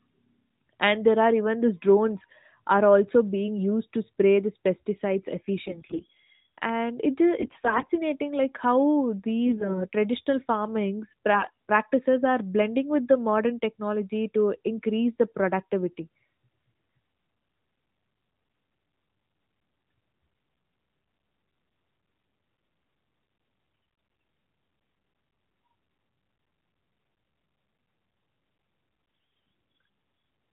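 Through the AMR narrowband link, which cuts everything above 4 kHz, there are six bursts of AMR bit errors: 5.66–6.06 s after "to spray these pesticides", 7.38–7.90 s, 9.46–9.86 s before "traditional farmings", 11.34–11.51 s just after it, 23.72–24.22 s, and a brief blip at 29.38 s. Flipped bits in the weakly protected parts of each frame misplace the excitation pulses and skew the gain and spectral detail, so pitch and level hold while the sound goes hoarse, scratchy and gargly.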